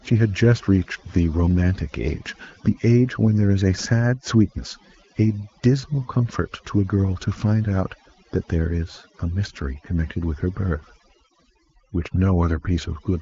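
Throughout the speech, the background sinks to near silence dotted with twinkling specks: overdone noise removal, pulling bands near the noise estimate down too hard. The top end stops at about 7.5 kHz, consistent with an AMR-WB path at a rate like 18.25 kbit/s.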